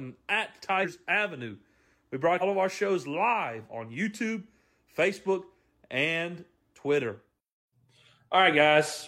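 Compressed frames are skipped at 0.79 to 0.86 s and 2.37 to 2.43 s, just before "of our shows live". Whole 46.4 ms frames go missing. The speech jumps ahead about 150 ms, then about 300 ms.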